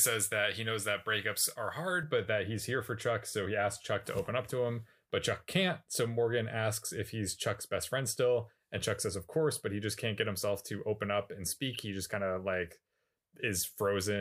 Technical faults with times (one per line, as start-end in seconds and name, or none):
0.00-2.03 pre-emphasis left on